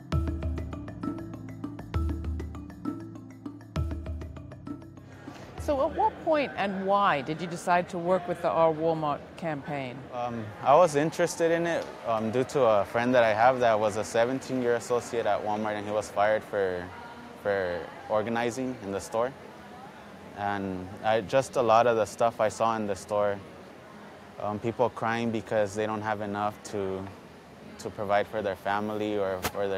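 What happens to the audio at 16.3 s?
Nothing goes wrong at 16.3 s; the audio plays through that point without any audible fault.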